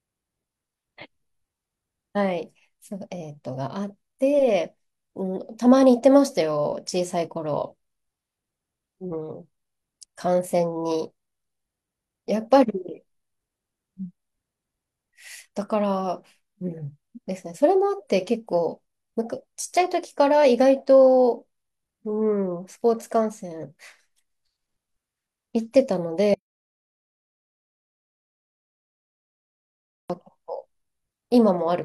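At 26.34 s the speech cuts out mid-flow and does not return until 30.10 s, an audio dropout to silence of about 3.8 s, most likely from the input being lost while recording continued. The waveform falls to a flat line, and the spectrogram shows a blank band with no room tone at all.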